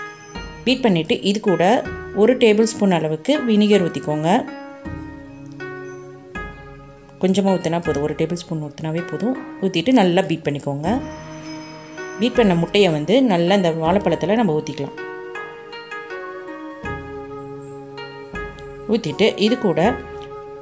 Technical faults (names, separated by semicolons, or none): none